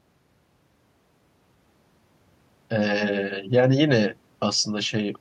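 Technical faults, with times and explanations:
No technical faults can be heard anywhere in the speech.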